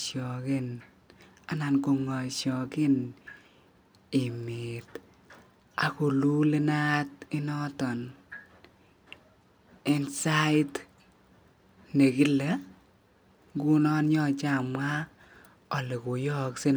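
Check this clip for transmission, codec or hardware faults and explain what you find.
Nothing in this speech recording points to a fault. There is no event here to locate or explain.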